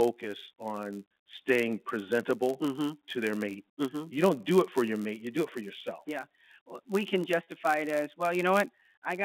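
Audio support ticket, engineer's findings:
Block size mismatch (padded): steady buzz at 91.5 Hz for the full clip. Probable cause is a writer stage handing short blocks to a reader expecting longer ones, with the remainder zero-filled. A gap lands in every block, giving the buzz. Playback runs slightly slow (0.996x).

Packet loss with pitch repetition: brief held, buzzy tone at 7.43 to 7.46 s, just before "it as". About 40 ms of audio lost, which fits two 20 ms packets dropped. The concealment repeats the last pitch period and fades it, so the gap is too short to reach silence. Fault is in the network path, not the G.711 mu-law line coding, whose 200 Hz to 3.6 kHz band is audible.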